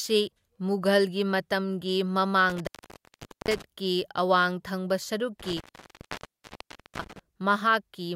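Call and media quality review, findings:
Intermittent contact, speech dropouts at 2.50–3.62 s (open about 0.81 s) and 5.40–7.19 s (open about 1.40 s). Loose cable or plug in the analogue path. Crackle at break and remake, faint hiss underneath, unlike packet-loss gaps, which leave clean digital silence or smeared concealment.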